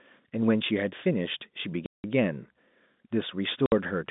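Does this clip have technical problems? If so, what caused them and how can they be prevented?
Yes. The speech has two packet loss gaps filled with silence: a 180 ms hole from 1.86 to 2.04 s and a shorter 60 ms one from 3.66 to 3.72 s. Both sizes are multiples of 30 ms, which fits 30 ms packets going missing in transit, and the receiver just dropped in dead air, so each gap starts and stops with a hard edge. The narrow G.711 telephone band is audible around it. To prevent it, add a jitter buffer with packet loss concealment or forward error correction, and look at the network path that's dropping packets.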